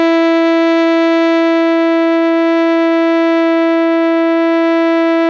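A short music excerpt, with nothing technically wrong to report. No fault can be heard at any point in it.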